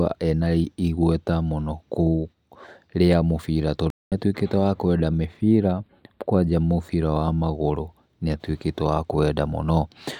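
At 3.90 s the speech cuts out completely and stays silent until 4.12 s, a gap of about 0.22 s, before resuming on "atuĩkĩte wa kwenda". This is a playback stall. The output simply has nothing to play for that stretch, most likely because the player's buffer ran dry or its audio thread was held up. The flow of speech stops abruptly mid-phrase rather than fading, and it picks up cleanly once data returns.

Shortly after "atuĩkĩte wa kwenda", from 5.41 s to 6.52 s, the speech takes on a hollow, phasey character. This is channel delay causing comb filtering. One channel runs a few samples behind the other, a fraction of a millisecond, and when the two are summed to mono the shared content cancels at regularly spaced frequencies. The first notch falls around 7 kHz, so the upper sibilance and air lose definition while the lower range holds up.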